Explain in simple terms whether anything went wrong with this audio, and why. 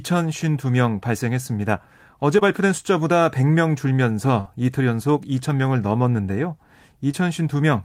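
Two brief short concealed packet losses hit this speech, at 2.39 to 2.43 s and 7.11 to 7.15 s. Bits of audio arrived late. The receiver patched each hole, leaving a tiny smear.

A burst of packet loss comes between them at 4.41 to 4.47 s. Several packets went missing together. The last sound was stretched and faded, then speech resumed with a piece skipped.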